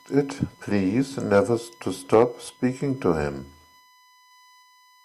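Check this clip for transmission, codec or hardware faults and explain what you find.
There's one fault here: USB whine running under the speech for the whole clip, a steady fixed-pitch tone at 1 kHz, sitting roughly 30 dB below the voice. That pitch points to current drawn in the bus's 1 ms frames bleeding in through power or ground.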